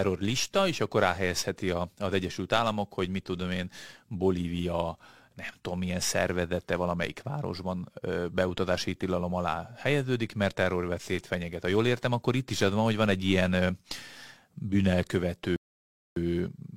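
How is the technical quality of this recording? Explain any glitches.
The speech has one glitch, a rebuffering stall from 15.56 to 16.16 s. The player ran out of downloaded audio and waited for more, so the sound drops to silence and resumes exactly where it stopped, adding 0.6 s without losing any content.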